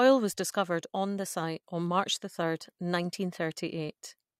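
No technical faults can be heard anywhere in the speech. There is nothing to place on a timeline.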